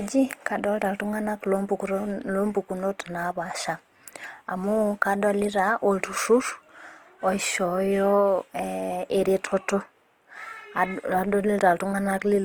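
Throughout the speech there's a grainy, rough texture, likely Opus compression in its music mode, filling starved bands with noise at something like 24 kbps.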